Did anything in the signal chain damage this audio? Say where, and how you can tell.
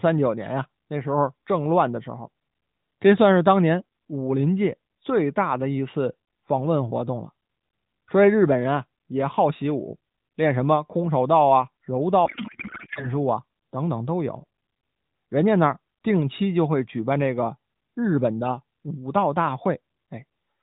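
Yes. From 12.26 to 13.09 s the speech gives way to garbled noise and warble that barely tracks it. This is a codec payload misread at the codec stage: octet-aligned AMR frames were unpacked as bandwidth-efficient, so every field landed in the wrong bit positions.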